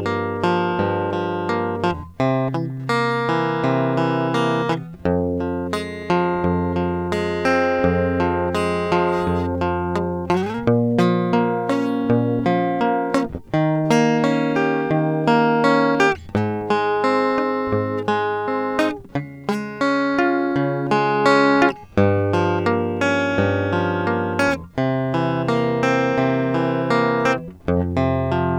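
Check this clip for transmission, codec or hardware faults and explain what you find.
Listening through the music, I find nothing in the signal that points to a transmission, codec or hardware fault.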